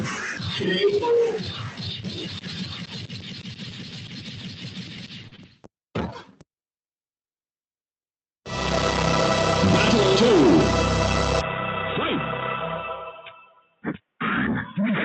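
What you've got here is non-speech audio run through a speech noise suppressor, so the suppressor keeps treating sustained parts and tails as noise. The level swings by something like 20 dB, giving a pumping, thinned-out feel where attacks survive but anything held sinks. You can hear the suppressor cutting specific stretches hardest: 0 to 0.66 s, dipping about 9 dB; a long run from 1.31 to 5.68 s, down about 14 dB at worst; 6.07 to 6.43 s, about 14 dB; and 13.45 to 14.0 s, about 13 dB. Around 5.27 to 5.34 s there's a short stall from a late packet. The jitter buffer ran dry, so the last bit of sound got stretched for 44 ms until the data showed up. Nothing is actually lost, but you hear a brief hang with a faint buzzy dip, and everything after lands that much later. Right after that, at 5.36 to 5.40 s, comes a short concealed packet loss. That's 20 ms of real audio that never arrived, papered over by extending what came before, so you get a tiny smear or wobble and whatever was in that gap is gone. 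Underneath all that, the band-limited top end and coding noise fit an Opus call path around 32 kbps with content reaching up to roughly 8 kHz.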